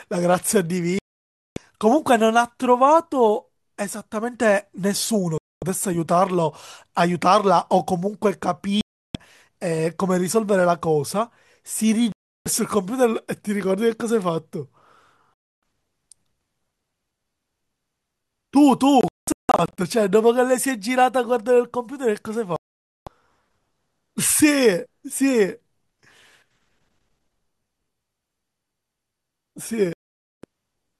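The speech keeps falling into silent holes: a digital broadcast dropout at 0.99 s (about 0.58 s gone), 5.38 s, 8.81 s, 12.12 s, 15.36 s, 19.01 s, 22.56 s and 29.93 s. The receiver loses good frames and mutes until clean ones return, so whatever was said in between never comes back. The one at 19.01 s breaks up into several short gaps over about 0.77 s, the longest around 0.19 s. The gap lengths fit roughly 24 ms frames.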